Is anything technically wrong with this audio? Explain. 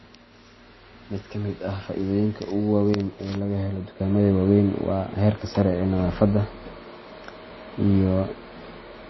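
Yes. Throughout the speech there is plainly audible coding damage, and nothing is present above 5.8 kHz, so the top end sounds dull. This is likely MP3 compression at a low bitrate, around 24 kbps. The encoder ran short of bits, dropped weak frequency components frame by frame, and cut the treble at a fixed frequency.

At 4.0 s the level jumps up by about 5 dB and stays there to the end, with the speech and background noise rising together. That is the mark of a sudden gain jump, likely a digital gain change applied from one sample to the next without any ramp.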